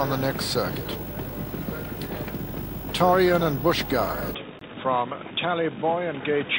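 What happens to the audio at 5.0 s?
At 5.0 s the input has likely switched to a poorer device, a change that starts at 4.35 s and runs to the end. The narrower device passes nothing above 3.8 kHz, so the sound turns dull and boxy, drops by roughly 5 dB, and carries new background noise about 30 dB down, with no gap at the switch.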